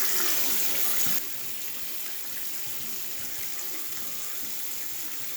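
A sudden gain jump occurs at 1.18 s: the level falls abruptly by about 8 dB between one sample and the next and stays down until the end of the clip. The foreground sound and the background noise drop together, so the change is in the overall signal level rather than in the source. The cause is likely a digital gain setting applied at once instead of being ramped smoothly over a short fade.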